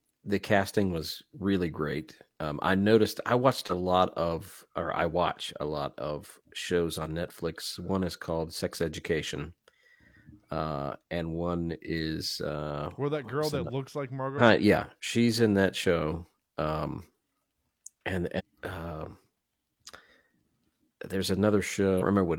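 Brief glitches break into the speech at 14.35 to 14.41 s, 18.35 to 18.41 s and 21.97 to 22.03 s, each about 50 to 65 ms long. They come from damaged data in the compressed stream, where corrupted bytes cause the decoder to misread frames and lose sync until it finds the next frame header.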